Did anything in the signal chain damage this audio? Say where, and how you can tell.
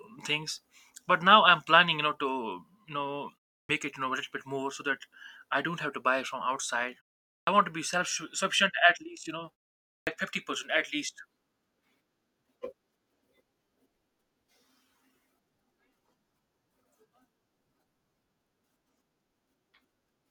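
Yes, there is a clipped start after a pause at the playback output device: at 3.63 s after "you know", 7.41 s after "to buy from outside", and 10.0 s before "fifty percent at least", onsets start abruptly. The device sleeps in silence and swallows about 60 to 70 ms while waking.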